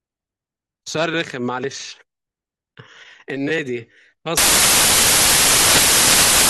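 From 4.37 s to the end at 6.49 s, the speech turns into samples built from the wrong bytes. The reader combines each sample's bytes out of order or shifted by one, so the rapidly changing low bits end up as the loudest part of every value. The result is a roar of loud, harsh broadband noise.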